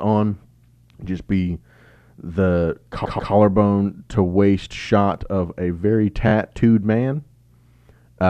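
Repeated frames occur three times: the decoder was handed the same compressed frames again and replayed them, so the speech stutters and the clip grows longer. From 3.04 to 3.32 s, a 139.3 ms block, consistent with about six frames, plays twice more, adding 278.6 ms. At 4.81 s a single 23.2 ms block repeats once. From 6.27 to 6.32 s another 23.2 ms block plays twice more, adding 46.4 ms of stutter.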